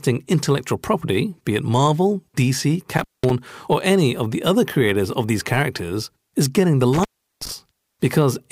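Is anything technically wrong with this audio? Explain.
Yes. The speech has an intermittent contact fault, twice: from 2.97 to 3.30 s, with the line open for about 196 ms, and from 6.93 to 7.52 s, open for about 367 ms. A loose cable or plug momentarily breaks the signal path, so the sound drops out abruptly. Crackle marks the edges as the contact makes and breaks, and faint hiss remains during each gap.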